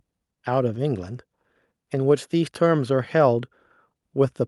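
No technical faults can be heard anywhere in this recording.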